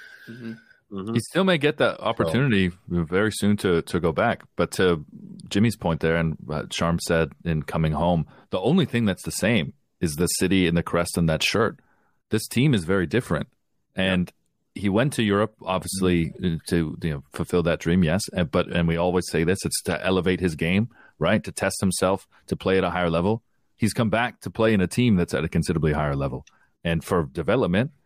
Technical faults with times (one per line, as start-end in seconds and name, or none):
none